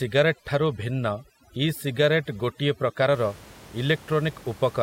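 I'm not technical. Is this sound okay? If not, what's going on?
No. From the start to about 3.14 seconds, the clip has overdone noise removal. A cleanup tool meant to quiet background noise was set far too strong. It shuts off parts of the sound it mistakes for noise, and quiet parts of the speech get cut along with them. The background drops and breaks up into twinkling, warbling specks. After that point, the ordinary room noise can be heard again, well below the voice.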